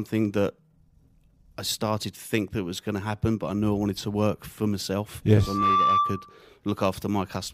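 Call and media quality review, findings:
Single tone swelling into a squeal, 5.40–6.45 s, near 1.2 kHz, builds over roughly 0.3 s to about 5 dB above speech. Loudspeaker feedback squeal: mic-to-speaker loop gain exceeds unity.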